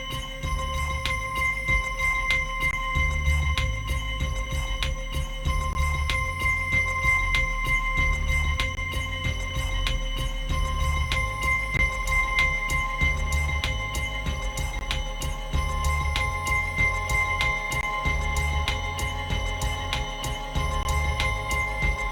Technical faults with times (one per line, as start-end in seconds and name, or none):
2.71-2.73 gap between chunks
5.73-5.75 gap between chunks
8.75-8.77 gap between chunks
11.77 gap between chunks
14.79 gap between chunks
17.81-17.83 gap between chunks
20.83 gap between chunks